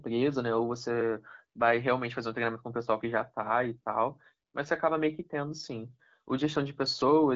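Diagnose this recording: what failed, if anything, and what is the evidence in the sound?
Nothing failed; the wideband voice codec behaves as designed.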